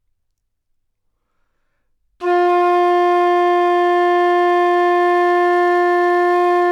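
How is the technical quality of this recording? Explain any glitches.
Faint, evenly spaced ticks run through most of the recording. From 0.44 s to 6.5 s, clock slip clicks recur roughly every 0.4 s, around fifteen in all. Likely cause: two unsynchronised clocks differing by roughly 50 ppm, so a single sample drops or repeats whenever the drift adds up to one whole sample.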